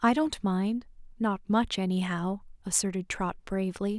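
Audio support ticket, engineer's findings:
Speech signal reviewed with no audible defects found and no component flagged for follow-up.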